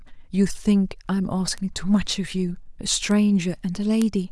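Speech with three bit error spikes, at 1.58, 3.11 and 4.02 s. Each is a single-sample sharp tick from a flipped bit, peaking at about -18, -18 and -6 dBFS.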